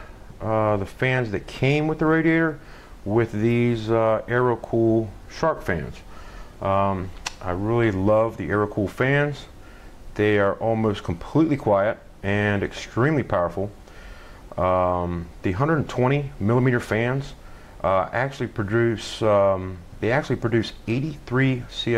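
Nothing stood out as a technical fault on listening to the clip.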